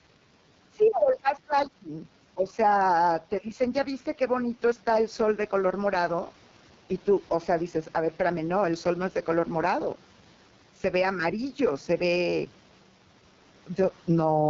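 Gain pumping runs through the whole recording. The gain swings by around 10 dB. The likely cause is input gain set far too high, with a fast limiter clamping every peak and flattening the dynamics.

The AMR wideband (HD Voice) codec is audible throughout, with heavy damage. The speech sounds rough and raspy, and nothing survives above 7.3 kHz. That fits AMR-WB's lowest mode, around 6.6 kbit/s, where the pulse-driven model struggles. The room noise sits about 33 dB below the speech.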